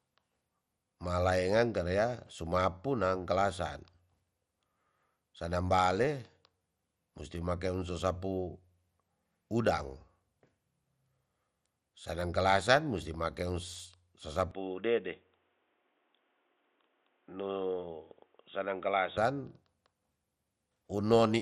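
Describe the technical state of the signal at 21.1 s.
At 21.1 s the speech carries MP2 compression artefacts that run through the whole clip. The dull, gurgling, granular texture likely comes from MPEG Layer II coding at a low rate, consistent with about 64 kbps, starving its sub-bands of bits. A spectrogram shows nothing above 14.3 kHz and blocky, flickering upper bands.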